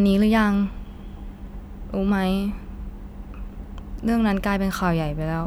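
No technical faults can be heard anywhere in this speech recording; the signal holds steady throughout, with no interruptions or disturbances to its level or continuity.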